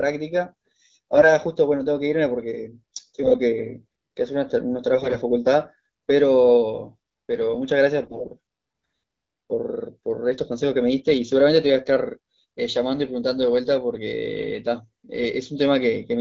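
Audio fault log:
1.14–1.28 s, 3.24–3.37 s, 4.94–5.18 s and 8.03–8.31 s: AMR bit errors. In brief bursts of roughly six to thirteen 20 ms frames, the speech keeps its pitch and level but turns hoarse and gargly. Corrupted lightly protected bits misplace the excitation pulses and skew pitch, gain and spectral detail, and the last burst is harsher at about double the error density. On a spectrogram, harmonics smear into noisy, broken striations while the waveform envelope stays intact. Outside these bursts the 12.65 kbit/s wideband coding sounds clear.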